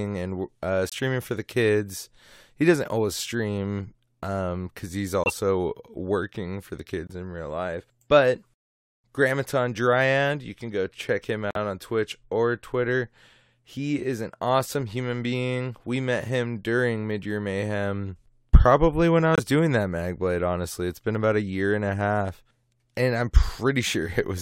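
Brief silences cut into the speech at 0.89, 5.24, 7.07, 11.51 and 19.34 s. They last about 42, 68, 36, 60 and 58 ms. Each is a corrupt frame muted. Damaged bits made the decoder reject a few compressed frames, and the player filled the gap with silence. The holes are roughly two or three frames long. Each starts abruptly, like a sudden dropout. The speech resumes on time, with no shift in timing.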